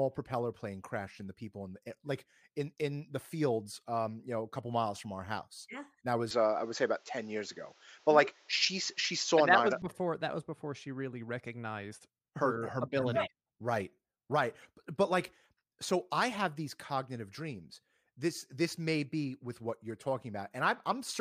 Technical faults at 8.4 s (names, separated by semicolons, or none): input switched to a poorer device